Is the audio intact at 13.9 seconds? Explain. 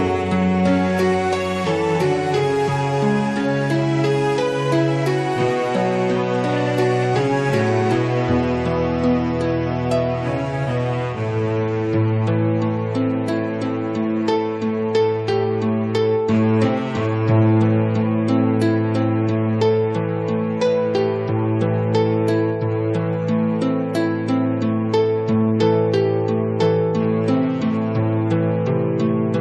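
Yes, the audio is intact at 13.9 seconds, with no dropout, click, distortion or other fault at that point.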